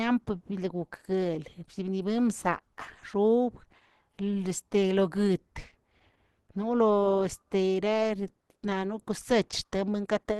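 Opus compression throughout: the speech stops at 12.1 kHz and sounds muffled and hoarse, likely from Opus hybrid mode at a bitrate near 16 kbps.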